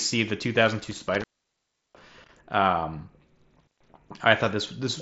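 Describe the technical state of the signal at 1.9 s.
At 1.9 s the signal sits inside an intermittent contact fault running from 0.80 to 2.39 s. A loose connection opens for about 0.71 s in total, dropping the sound to faint hiss with crackle at each break. Overlapping it, concealed Bluetooth headset packet loss spans 1.91 to 1.93 s. About 22.5 ms of audio went missing, which fits roughly three lost frames. The receiver filled the gap by repeating a matching recent stretch, leaving a brief buzzy hold and a slight warble as real sound resumes.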